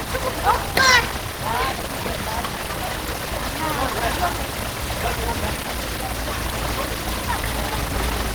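A recording of everyday sounds carrying plainly audible Opus compression throughout, likely from its hybrid speech mode at a rate that fits about 16 kbps. Tones sound hoarse and grainy. On a spectrogram, upper bands look smeared and noise-filled rather than gapped, cutting off near 20.3 kHz.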